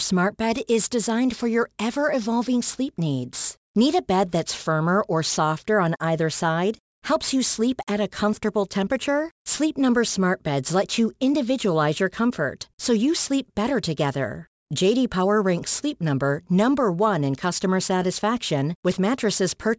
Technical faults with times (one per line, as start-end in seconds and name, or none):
0.00-19.79 aliasing